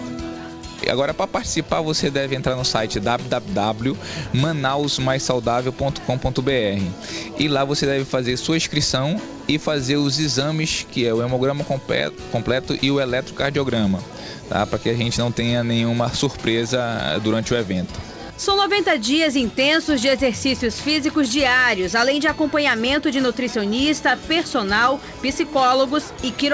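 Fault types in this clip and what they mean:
No faults can be heard anywhere in the clip. It has come through a call path with a wideband codec, and the audio stops at about 8 kHz, which fits G.722 at around 64 kbps.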